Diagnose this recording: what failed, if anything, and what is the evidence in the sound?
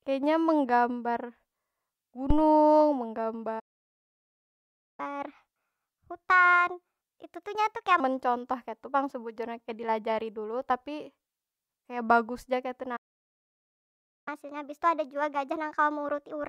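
Phantom power thump, analogue wiring: a deep thump at 2.30 to 2.45 s dies away within about 33 ms. A plosive or handling bump would track the speech. This is a supply switching on a live input, the step passing through the coupling capacitors.

Playback stall, playback stage: the speech stops dead at 3.59 s for about 1.39 s, resuming at 5.00 s, and again at 12.96 s for about 1.30 s, resuming at 14.28 s. The silence is clean, unlike a lossy network gap. The player likely ran out of buffered data.

Catch-up at higher speed, playback resampling: after each stall the speech runs 1.25 times fast, from 5.00 to 8.00 s and from 14.28 s to the end, with pitch raised about four semitones. Because tempo and pitch rise together, this is the player draining its backlog rather than a pitch-shift fault.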